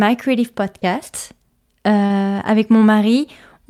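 A short speech clip with two spots of short concealed packet loss. Around 0.79 to 0.84 s about 20 ms of the stream didn't arrive in time, and the decoder papered over it by carrying the previous sound forward, so you get a quick smear. At 2.06 to 2.12 s a longer 40 ms gap gets the same treatment, a brief wobble before it blends back into the real audio.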